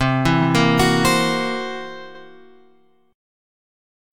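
From 0.01 to 1.13 s the peaks show hard clipping: the signal overdrives a stage by about 5 dB, so the waveform tops are sliced flat, and a spectrogram shows harmonic smear reaching high frequencies, heard as crackle on peaks. Inside that stretch, at 0.41 to 0.46 s, repeated frames replay a 42.7 ms block once, which fits two compressed frames being written twice. The waveform shows the same shape twice in a row, heard as a brief stutter. At 2.14 to 2.22 s a longer 85.3 ms block repeats once, consistent with four frames, adding 85.3 ms and appearing as a duplicated spectrogram pattern.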